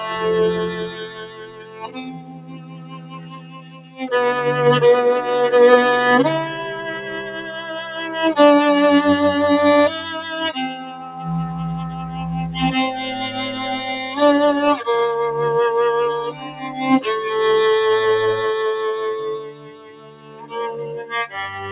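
A noise suppressor built for speech stays active on non-speech sound through the whole clip. It treats held tones and decaying tails as noise, so levels swing by around 20 dB and the sound pumps. Unlike a compressor, attacks mostly pass while sustained material sinks. Within the narrow band, which stops at 4 kHz as expected on a narrowband call path, the suppressor cuts sound deepest from 0.68 to 4.01 s and from 19.4 to 21.14 s (about 14 dB). Shorter dips of about 7 to 8 dB fall at 10.81 to 11.27 s, 11.47 to 12.3 s and 16.32 to 16.78 s. Here tails fade early rather than dropping out abruptly as in packet loss.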